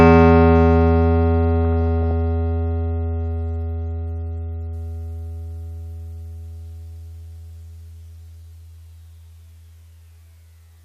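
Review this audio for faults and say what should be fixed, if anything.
DAB burbling, 1.81 to 2.11 s: a bit error rate well under one percent escapes error correction, so corrupted audio data disturbs sub-bands across the music, hitting roughly 19 frames. Prevent it with stronger reception, such as a better-placed antenna, and concealment that mutes frames with errors.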